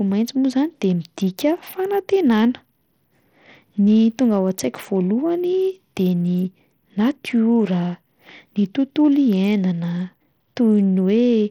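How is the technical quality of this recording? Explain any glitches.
The recording has one fault that runs the whole length of the speech. Throughout, treble flickers and drops out under a gritty haze, likely Bluetooth SBC compression, with a starved bit pool leaving the top sub-bands coarsely coded, consistent with a rate near 80 kbps.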